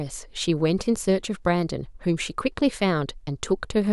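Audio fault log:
No faults are heard in this speech recording. Nothing in it calls for an entry in this log.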